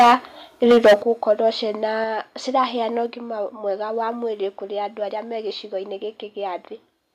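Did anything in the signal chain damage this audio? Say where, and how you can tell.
Yes. Microphone overload at 0.00–0.15 s, 0.63–0.94 s and 1.30–1.32 s, just before "ciĩna ciraheana ũgima mwega": loud speech peaks sound flattened and crackly, about 7 dB and 13 dB over full scale, then right at it. This likely happens at the converter stage, from input gain set too high.

Microphone volume stepped down at 1.02 s, 2.04 s (before "ciraheana ũgima mwega wa") and 3.06 s (between "ciĩna ciraheana" and "ũgima mwega wa mwĩrĩ"). Speech and background drop abruptly by about 9, 4 and 2 dB, likely call processing cutting device input gain after clipping.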